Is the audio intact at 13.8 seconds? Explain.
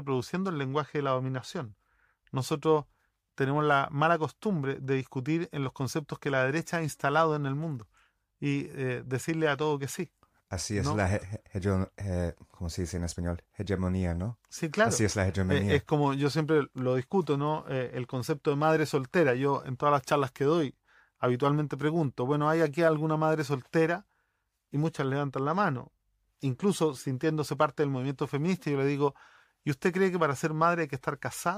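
Yes, the audio is intact at 13.8 seconds, with no audible fault at that moment.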